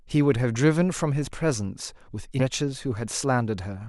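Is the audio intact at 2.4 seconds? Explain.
No. From 2.39 to 2.42 s, a stream segment was likely skipped after failing to load, so the speech jumps abruptly ahead with a brief blip.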